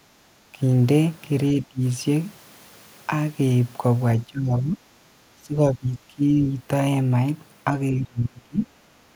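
Background gated by the echo canceller, 0.01 to 0.24 s: the canceller pulls the microphone down about 10 dB while the loudspeaker plays, so the room sound briefly drops away. Speech suppressed in double talk follows at 0.52 to 0.58, 1.53 to 1.82, 4.24 to 4.8, 5.37 to 6.43 and 7.92 to 8.69 s. The speech dips from a slight few dB to around 30 dB deep, likely because the canceller mistakes overlapping talk for echo.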